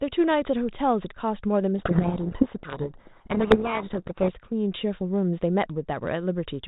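From 1.78 to 4.33 s a codec payload misread buries the speech in harsh distortion: the G.726 code words are read with their bit order reversed. Unlike low-bitrate G.726 hiss, which rides under speech, this swamps it, then stops abruptly.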